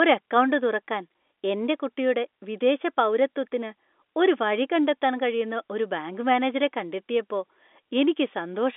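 No technical faults can be heard in this telephone-band speech.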